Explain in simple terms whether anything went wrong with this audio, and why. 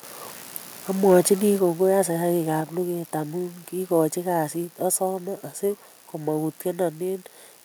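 Between 1.1 and 1.33 seconds the loudest part of the speech turns harsh and crackly. That's microphone overload, most likely caused by the input being set so high that the peaks ran past what the recording could hold, so their tops were cut flat. Only a small share of the sound is affected, and it's brief. Unlike general muffling or noise, the roughness comes and goes with the loudest moments.

Just after that, at 1.6 seconds, the whole sound, voice and background together, suddenly gets quieter in a single jump. This is a microphone volume stepped down, likely the call software reacting to that overloaded peak by turning the microphone's level down. What sets it apart from someone simply speaking more softly or moving away is that everything drops at once, instantly, and stays at the lower level.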